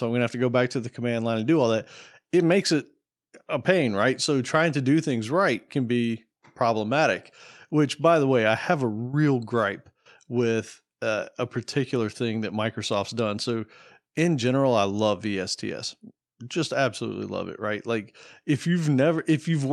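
A speech recording with nothing technically wrong with it, so there are no times or causes to report.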